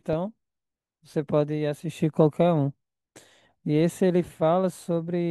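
No faults turn up anywhere in this speech recording.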